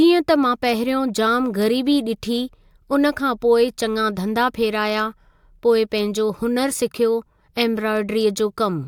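No technical faults occur at any point in the speech, so there is nothing to describe in time order.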